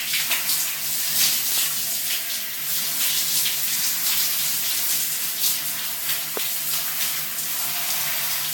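A recording of everyday sounds that has a swirly, smeared, hollow quality throughout, with blurred attacks and nothing above about 17.3 kHz. This is generation loss, most likely from repeated lossy encoding, with a Vorbis-like character and a low bitrate around 70 kbit/s. It sounds as though the audio was decoded and re-encoded several times, each pass quantising on a fresh frame grid so that noise and spectral gaps pile up. At 1.52 to 1.60 s a loud pop arrives as a quick double pop, peaking about 15 dB above the surrounding sound. A second, single loud pop at 6.37 to 6.39 s sits about 10 dB above it. The sound carries on underneath both. Each pop is a short voltage pulse added to the signal, likely from a plug, switch, static discharge or driver glitch.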